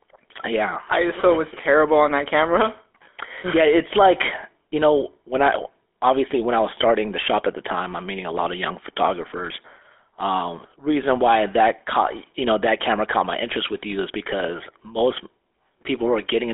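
From start to finish, the speech carries plainly audible GSM full-rate codec damage. The band runs from about 300 Hz to 3.5 kHz, which fits a telephone line, and the coding fits the 13 kbps first-generation GSM codec. That codec models the vocal tract and excites it with a sparse, regularly spaced pulse train, which produces a buzzy, gravelly texture. That grain is what separates it from a clean band-limited phone line, which sounds thin but smooth.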